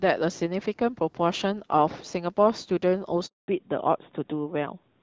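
At 3.26 s the speech cuts out in a handover gap. While the call was being passed between networks, no speech frames arrived, so the voice fades within a few tens of milliseconds and stays silent until 3.48 s, a 220 ms hole. The waveform shows a flat line there, and the spectrogram shows a blank vertical band.

From 3.48 s to the end, there is a fallback to narrowband. The call drops from HD Voice, whose earlier clarity fits AMR-WB at 12.65 kbit/s, to an older narrowband codec, most consistent with AMR-NB at 12.2 kbit/s. Everything above 4 kHz vanishes, leaving the voice duller and rougher. The spectrogram shows a sharp ceiling at 4 kHz where energy previously extended higher.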